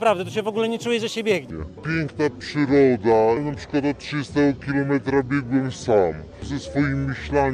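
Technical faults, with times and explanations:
1.51–7.53 s, section at the wrong speed: from 1.51 s to the end the audio plays at 0.633 times its proper rate, so everything turns slow and drops in pitch by roughly seven semitones together, most likely from a player or editor running this stretch against the wrong clock. On a spectrogram, harmonics and formant bands shift abruptly downward at 1.51 s and sit closer together. The waveform's cycles and envelopes stretch out, with transients spread over longer spans.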